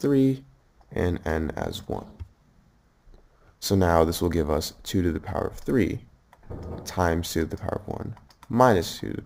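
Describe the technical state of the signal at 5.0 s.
At 5.0 s you're hearing imaging from sample-and-hold upsampling, present across the whole clip. Each sample was simply repeated with no smoothing filter, which fits a jump from roughly 22 kHz to 48 kHz. That leaves mirrored copies of the spectrum, the lowest spanning about 11 kHz to 22 kHz at about -24 dB. It comes across as a bright metallic fizz riding on the sound and tracking its level.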